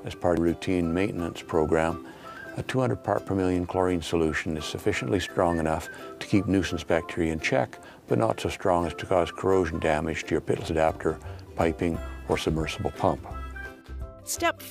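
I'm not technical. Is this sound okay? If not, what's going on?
No. There are dropped buffers (overruns) at 0.37, 2.37, 10.68 and 12.35 seconds. At each one the sound suddenly jumps ahead. A short piece is simply missing, with no gap of silence: about 0.15 seconds at the first two, and a much shorter slice at the last two. The likely cause is the recording program falling behind, so the hardware overwrote audio before it could be saved.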